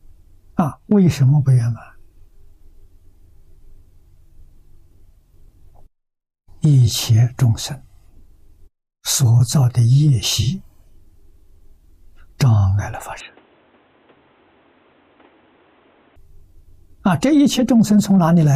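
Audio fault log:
13.20–16.16 s, input switched to a poorer device: sound turns dull, nothing above 4 kHz, roughly 5 dB quieter, new noise floor; spectrogram's top empties, waveform shrinks; likely an input change.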